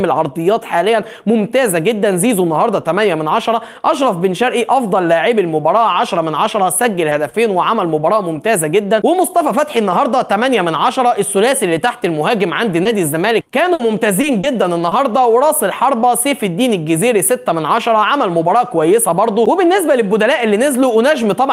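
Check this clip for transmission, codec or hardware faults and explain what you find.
The clip has transmission faults from lost packets, concealed by the receiver. Short concealed packet loss occurs at 7.09, 7.29, 12.83, 14.21, 14.41 and 14.89 s. Each time about 20 ms of audio arrived too late, so the receiver extended the preceding sound, leaving a brief smear or wobble. A burst of packet loss at 13.73 to 13.81 s left about 60 ms missing; the receiver carried the last sound forward and faded it, giving a held buzz or hiss before the audio resumes.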